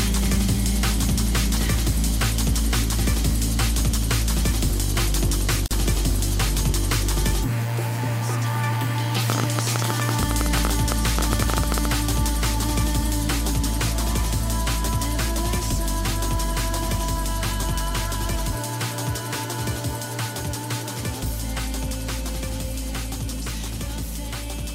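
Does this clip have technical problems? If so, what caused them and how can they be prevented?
Yes. There are two problems.

At 5.66 s, a gap at a join of encoded pieces opens in continuous sound. It lasts about 46 ms, to 5.71 s. The codec smears its edges. The sound then resumes where it stopped. Two separately encoded pieces were joined as they were. Each carried its encoder's start-up delay and end padding. That silence stayed in at the seam. Trimming encoder delay and padding before joining, or encoding the whole piece in one pass, prevents this.

From 9.30 s to 11.86 s, a train of clicks ticks over the sound. They arrive at about 12.9 per second, on an uneven pace. There are around thirty of them. The peaks reach roughly 20 dB above the surrounding sound. The clicks share much the same shape. This points to a repeating outside pulse. The likely source is interference from nearby equipment or a faulty connection or power supply. 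Moving equipment away and using a stable, well-connected interface prevents this.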